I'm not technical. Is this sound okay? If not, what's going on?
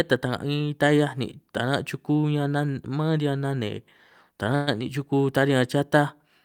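No. At 4.55 s the data carrying the call was likely held up on its way, causing a call audio freeze: the last bit of speech is stretched into a fading buzz until 4.69 s, then carries on where it stopped, with nothing lost.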